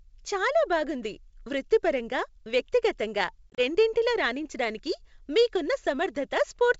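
From 3.51 to 3.61 s, just after "చాలా బాగుంది వృత్తిపరంగా వ్యక్తిగతంగా", packet loss on an ADPCM call drops several packets: about 60 ms of audio scattered over 80 ms, the longest gap 30 ms. The gaps are filled with silence, and because the decoder misses those packets, its predictor and step size drift from the sender's. The speech breaks into hard-edged holes and returns with brief distortion before "రెండిటిలో రాణించటానికి మీకున్న".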